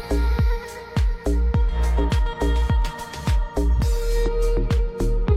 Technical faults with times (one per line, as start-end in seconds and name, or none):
4.23-4.29 stream segment skipped